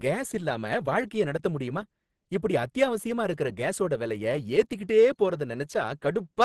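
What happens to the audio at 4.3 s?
At 4.3 s the speech carries the same damage heard across the whole clip: likely Opus compression, in a low-rate hybrid mode that points to about 16 kbps. Nothing sounds above 12.1 kHz, and the voice comes through muffled, hoarse and grainy.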